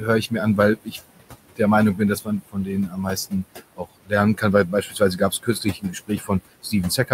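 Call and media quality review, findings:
Noise suppressor artifacts, throughout: background pulled down by about 20 dB between phrases, rising under speech. It is frame-by-frame band gating, not steady room noise, which sits about 14 dB below speech.

Speech cut by the noise suppressor, 0.76–1.6 s (around 0.3 s affected in total) and 1.95 s to the end: soft consonants and endings dip up to about 22 dB. The speech itself is swallowed, unlike the gaps of a dropout.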